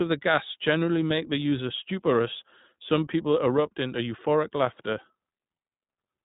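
From start to finish the speech has passed through the iLBC codec, which encodes each short frame's excitation on its own, without drawing on the previous frame; the blocky texture fits 20 ms frames at around 15.2 kbps. Because the signal is cut off near 3.8 kHz, the sound is narrow and muffled, and the frame-by-frame coding leaves a plainly audible roughness, with a slightly synthetic edge.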